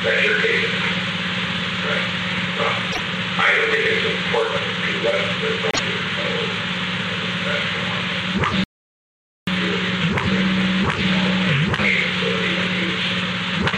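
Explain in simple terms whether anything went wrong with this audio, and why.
A couple of things go wrong here. At 2.91 s and again at 5.71 s there's a brief glitch, under a tenth of a second, where the sound skips ahead and garbles. That's most likely a broken MP3 bit reservoir: a few chunks of the file went missing, and the next chunks tried to borrow data that wasn't there anymore.

Then from 8.64 s to 9.47 s the audio cuts out completely for about 0.83 s. That's an audio dropout to silence. It's dead digital silence with no background hiss at all, so the input was likely lost briefly while recording carried on, and whatever happened in that gap is gone.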